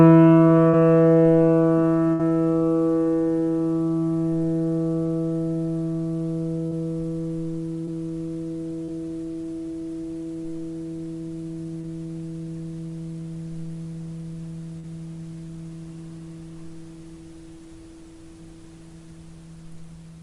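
A brief smear or wobble at 0.69 to 0.75 s is short concealed packet loss. About 40 ms of audio never reached the decoder in time, and the receiver papered over the gap by extending the preceding sound before blending back into the real signal.

At 2.13 to 2.21 s the sound turns into a short held buzz or fading hiss, then resumes slightly further along. This is a burst of packet loss. Roughly 60 ms went missing in a row, and the receiver kept stretching the last sound while turning it down, so that stretch of the original is simply gone.

The same short smears or wobbles return at 6.67 to 6.73 s, 7.85 to 7.89 s, 8.85 to 8.91 s, 11.81 to 11.85 s and 14.79 to 14.85 s. Each is another short concealed packet loss, with about 20 to 40 ms missing and filled from the preceding sound. Brief transients falling inside those gaps can drop out entirely.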